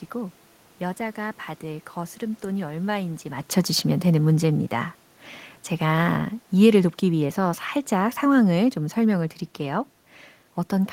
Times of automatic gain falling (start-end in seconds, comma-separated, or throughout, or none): 5.82-9.40